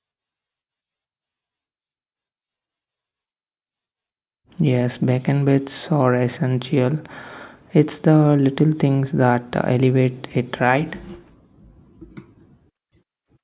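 No technical faults are audible anywhere in this recording.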